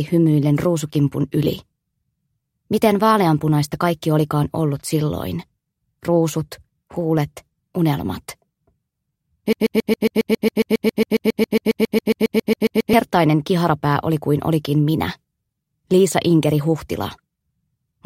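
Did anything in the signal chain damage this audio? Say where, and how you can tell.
Yes: a broken-record loop from 9.53 to 12.93 s, where a 137 ms fragment repeats 25 times. This likely comes from a stalled playback buffer replaying its last block, so the intervening audio is lost.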